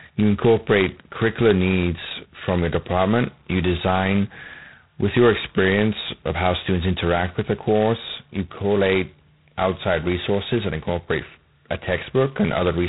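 From start to finish the speech carries heavy G.726 ADPCM damage, a harsh rasping hiss that rises and falls with the speech level, which fits the coarse 16 kbit/s mode. On a spectrogram, energy stops sharply near 3.9 kHz, with grainy noise filling the bands beneath.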